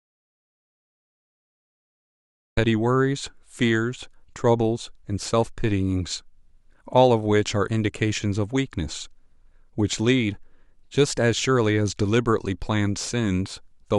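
A speech clip with an audio dropout to silence at the very start. From 0.0 to 2.57 s there is nothing but silence, with no room tone. The speech comes in abruptly after that. The input was likely lost while recording continued.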